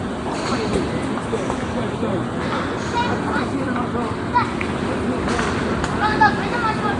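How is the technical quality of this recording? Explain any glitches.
The technical quality is compromised throughout by audible codec damage, most likely from Nellymoser compression. From start to finish the audio carries a rough, grainy hiss around its content and a smeared, watery blur, and nothing is present above about 10.6 kHz. Nellymoser Asao, the old Flash microphone codec, codes short fixed blocks with a tight bit budget. Bands too weak to earn bits are replaced with synthetic noise, which produces that hissy halo. The blur comes from the block coding. The degree of damage fits a bitrate in the region of 44 kbps.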